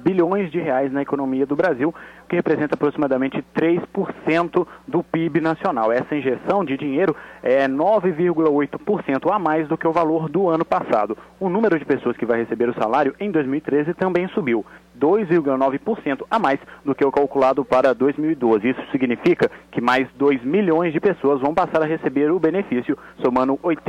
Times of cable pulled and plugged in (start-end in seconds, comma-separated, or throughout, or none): none